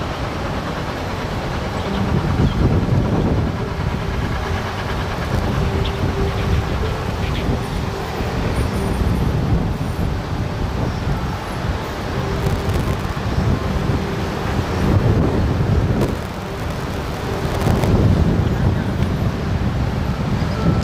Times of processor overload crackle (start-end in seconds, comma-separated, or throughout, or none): 5.14-5.40, 12.40-13.16, 16.01-17.88